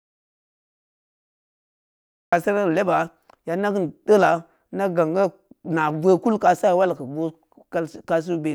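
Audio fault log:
0 to 2.33 s: audio dropout to silence, already under way at the start, with silence and no room tone, unlike a pause, likely from lost input.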